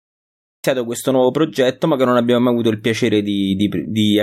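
The recording or stream came up late, which produces a cut-off start. For the first 0.64 s there is only digital silence, and at 0.64 s the speech arrives already in progress. Capture was not yet running when the talker began, so the opening of that first sound never reached the file. The audio has no natural onset or fade-in. It jumps abruptly from dead silence straight into speech at full level, partway through.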